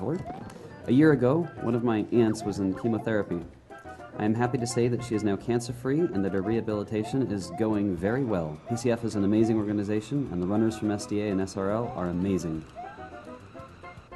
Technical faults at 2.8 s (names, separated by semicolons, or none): none